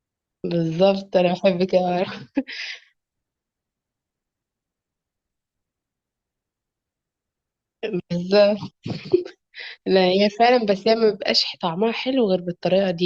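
No technical faults can be heard anywhere in the speech, and the signal stays continuous and steady throughout.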